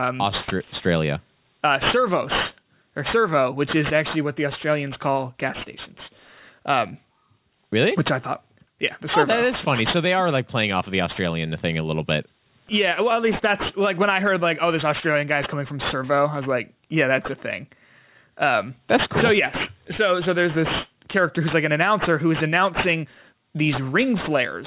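Aliasing runs through the whole clip: it sounds like a drop to about 8 kHz without filtering, so sibilants fold back under 4 kHz, fairly loud, gritty and metallic.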